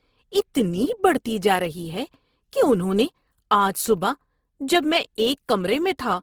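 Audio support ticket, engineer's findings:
Speech throughout, 0 to end. Plainly audible Opus compression, likely the cause. Texture is rough and grainy, with a noisy edge on voiced sounds and less swirling than MP3. Points to the music (CELT) mode at a low rate, which fits roughly 16 kbps. Band energies are held, but starved bands are filled by folding or noise. Fullband kept, with content up to about 20.4 kHz, so no muffling. Suspect the encoder bitrate setting.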